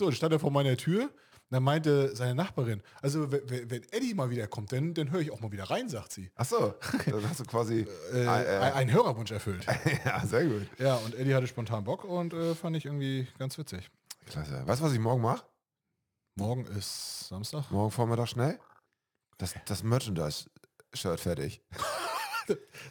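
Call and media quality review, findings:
Crude rate conversion, whole clip. Gritty, inharmonic fizz riding on louder and brighter passages, error roughly 25 dB under the signal. Likely component: resampler using nearest-sample pick/repeat, no anti-aliasing filter, consistent with 44.1 kHz to 48 kHz. Spectrogram: faint non-harmonic lines and aliased images mirroring strong partials. Waveform: small periodic stair-step glitches.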